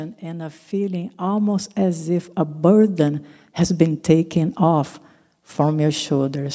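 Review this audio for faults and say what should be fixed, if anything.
Automatic gain rising runs from 0.2 to 4.91 s. The gain control judged the input too quiet. It lifted speech and background together by about 9 dB. Fix it by setting input level correctly at the source, so the gain control has no reason to climb.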